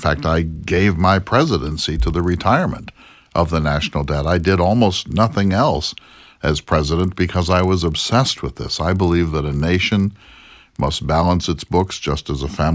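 Resampler restarted on every block, throughout the speech: each 40 ms block was converted on its own, apparently from 24 kHz to 16 kHz, so every edge lacks its true neighbouring samples. The small edge errors repeat at 25 Hz, a low buzz present only while speech sounds.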